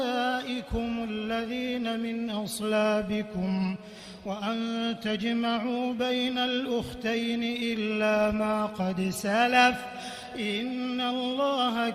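No technical faults can be heard anywhere here.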